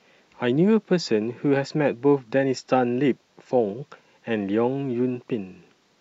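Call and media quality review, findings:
No audible faults found in the speech; nothing to flag for any component.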